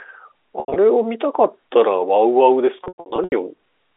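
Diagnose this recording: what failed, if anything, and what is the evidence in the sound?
The network stage failed, showing packet loss with pitch repetition in two bursts. From 0.60 to 0.76 s, 120 ms goes missing in scattered runs up to 80 ms. From 2.84 to 3.32 s, 300 ms drops out, with runs up to 100 ms. The gaps fit 20 ms packets. The receiver loops the last pitch period, so each gap sounds like a held, buzzy tone that fades within about 50 ms. On a spectrogram, the harmonics freeze into flat horizontal lines. On the waveform, identical repeating cycles decay into near-silence, then cross-fade back. The G.711 A-law coding band-limits the call to 300–3600 Hz.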